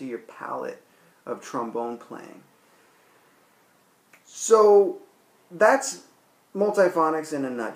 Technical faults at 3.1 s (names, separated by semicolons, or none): none